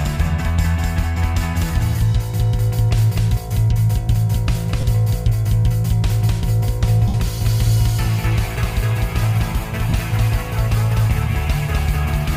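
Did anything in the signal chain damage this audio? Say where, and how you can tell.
Yes. A doubled audio track runs throughout: a full-strength copy trails by roughly 300 ms with no room colour, likely from a second, slower capture path.

There are lost LE Audio frames on the Bluetooth link at 4.81 to 4.83 s, 7.08 to 7.14 s and 9.89 to 9.93 s. The LC3 decoder patched each gap with a noisy smear built from the previous spectrum.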